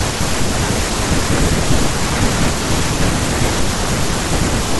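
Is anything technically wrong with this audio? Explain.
No, nothing is technically wrong with this audio. No fault can be heard anywhere in the recording.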